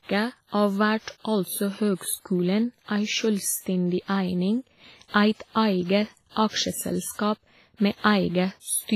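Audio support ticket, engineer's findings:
Ringing, washy speech throughout, hiss swelling and fading with the signal, nothing above 15.3 kHz. Likely WMA compression, consistent with a low bitrate near 24 kbps: long transform blocks smear quantisation noise over tens of milliseconds, weak spectral lines zeroed. Heavy damage.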